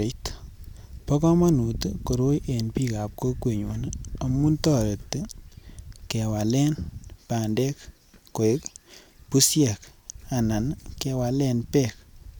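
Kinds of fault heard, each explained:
No audible faults detected.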